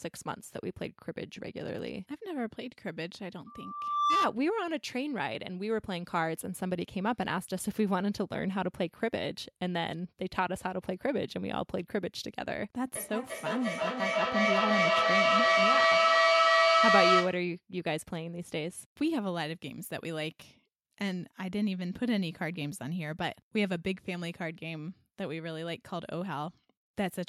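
Loudspeaker feedback squeal, 3.46 to 4.34 s: the microphone picks up its own loudspeaker, and a 1.2 kHz tone swells over roughly 0.7 s to about 10 dB above the speech.

Feedback echo between two devices, 12.95 to 17.49 s: a second device replays this microphone's speech back into it, so repeats arrive roughly every 300 ms and pile up to about 7 dB above the speech.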